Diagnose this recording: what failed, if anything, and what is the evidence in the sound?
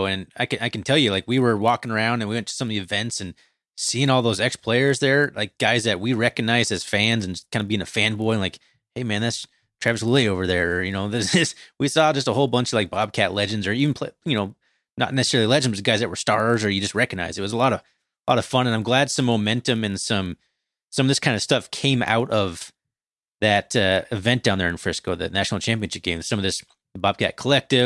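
The resampler restarted on every block, so the sample-rate conversion stage is at fault. A 50 Hz buzz rides on the speech for the whole clip and drops out in the gaps. Each 20 ms block was converted from 48 kHz to 24 kHz with no memory of its neighbours, leaving a small error at every edge.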